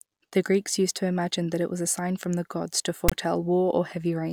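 Right after "from the gods to", at 3.09 to 3.12 s, there's a short burst of file tags played as audio: a tag block's text bytes got decoded as samples, giving a hard-edged, lopsided rasp, with its zero padding dropping briefly to dead silence.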